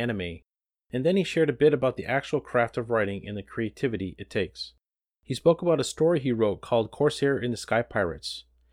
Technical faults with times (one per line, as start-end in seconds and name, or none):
none